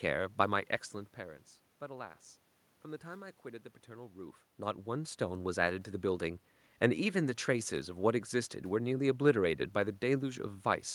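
Nothing technical stood out on listening to this speech clip, beyond the room's own background noise and the talker shifting position around 0.5 and 4 seconds.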